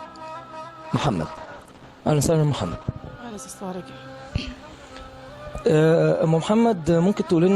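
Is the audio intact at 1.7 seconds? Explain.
No, a call bitrate drop runs from 0.84 to 2.99 s. The bandwidth estimate fell, so the encoder had far fewer bits and coded coarsely, trimming the highs. The sound turns rough and muffled, which fits a fall from 64 kbps to about 11 kbps.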